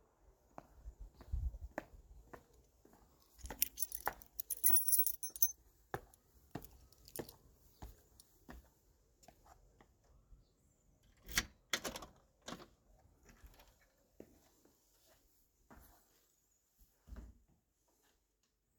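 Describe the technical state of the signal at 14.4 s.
At 14.4 s the audio is intact, with no technical fault present at that moment.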